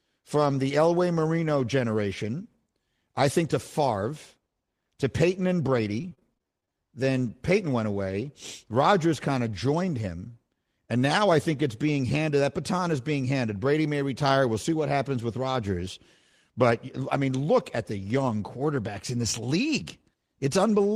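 From 6.01 to 6.70 s the speech breaks up with repeated packet loss, giving a robotic sound. Eight short gaps fall in quick succession, the longest about 24 ms. The receiver patches each hole by extending the preceding audio, covering roughly a fifth of the stretch in total, but some material is simply missing. The result is a choppy stutter where the synthetic fill and the dropouts alternate.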